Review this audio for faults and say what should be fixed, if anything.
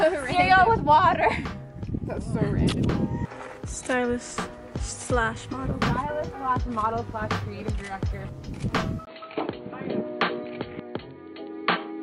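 At 9.05 s the input was likely switched to a poorer device, lasting to 12.02 s. After a 20 ms gap, nothing above 4.4 kHz remains, so the sound turns dull and boxy, shifts level by roughly 5 dB and gains faint new background noise. Locking recording to one input device, with automatic device switching and headset call profiles disabled, would prevent this.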